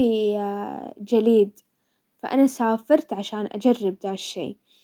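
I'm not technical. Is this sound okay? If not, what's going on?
Yes, this sound is okay; nothing is going wrong in it.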